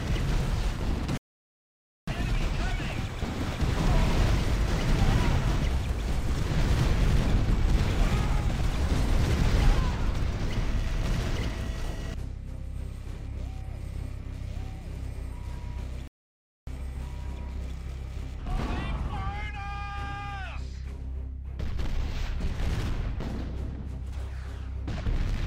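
Rebuffering stalls at 1.17 to 2.08 s and 16.08 to 16.67 s: the player's buffer ran dry, so playback falls silent for 0.90 s and 0.60 s, then resumes exactly where it stopped.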